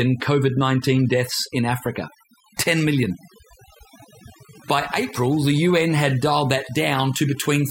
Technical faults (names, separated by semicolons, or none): mains buzz; overdone noise removal